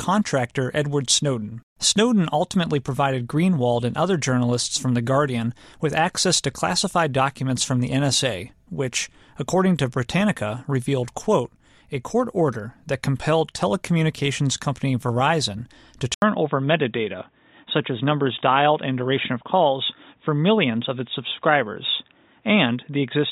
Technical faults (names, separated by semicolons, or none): input switched to a poorer device